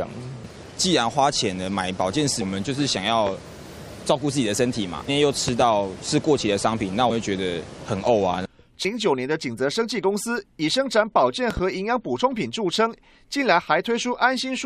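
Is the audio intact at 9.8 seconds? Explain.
Yes, the audio is intact at 9.8 seconds, with no dropout, click, distortion or other fault audible at that moment.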